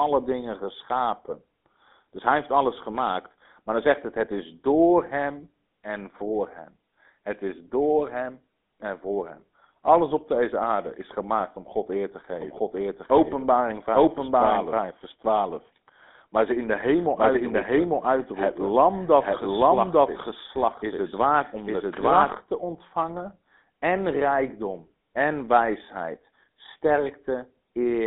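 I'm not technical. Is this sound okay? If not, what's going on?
No. Throughout, the speech sounds buzzy, gravelly and muffled, with no crisp treble. That is the GSM full-rate codec, an old mobile-phone coding that simplifies voices and removes highs.

From 12.4 to 22.3 s, right after "eer te" until "te ontvangen en rijkdom", you hear a doubled audio track: a second copy trails about one second behind, equally loud, likely from the sound being captured twice.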